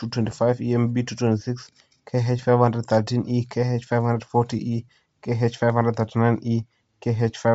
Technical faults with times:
0.00-7.54 Bluetooth LC3 compression

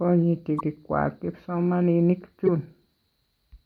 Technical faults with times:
0.56-0.61 damaged data in a compressed stream
2.46-2.49 damaged data in a compressed stream

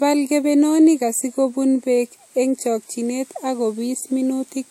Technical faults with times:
0.00-4.70 low-bitrate audio saved at a high bitrate

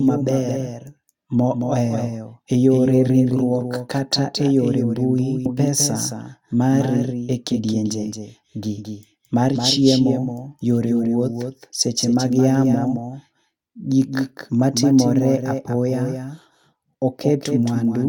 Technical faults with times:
0.00-18.09 doubled audio track
5.45 skip ahead
6.54-7.04 jitter buffer speed-up

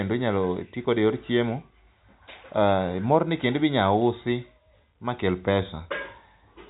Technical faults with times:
none

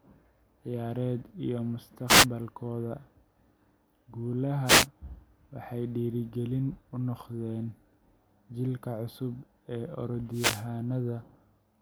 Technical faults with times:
2.07-2.26 wireless microphone noise hit
4.65-4.87 wireless microphone noise hit
10.31-10.66 wireless microphone noise hit

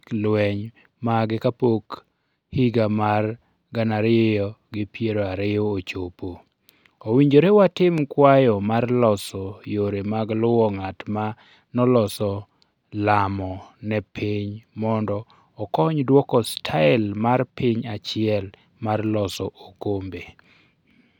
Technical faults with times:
7.98-8.00 loud pop

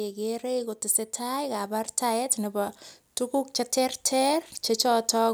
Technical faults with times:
0.14-5.29 automatic gain rising

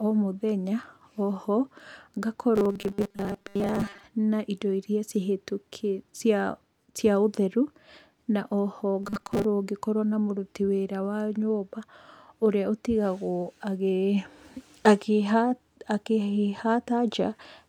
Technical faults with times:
2.55-4.03 robotic sound from repeated short buffers
9.03-9.44 robotic sound from repeated short buffers

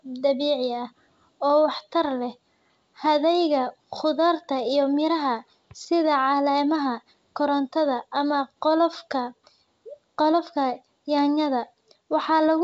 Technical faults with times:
none

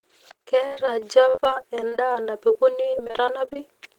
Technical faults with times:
0.67-3.56 repeated packet loss (robotic sound)

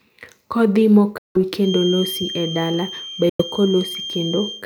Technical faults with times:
1.18-1.37 Bluetooth dropout
1.57-4.65 feedback whistle
3.29-3.42 Bluetooth dropout

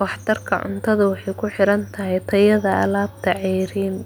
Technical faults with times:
none

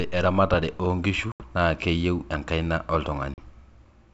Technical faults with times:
1.32-1.44 packet loss on an ADPCM call
3.34-3.39 packet loss on an ADPCM call

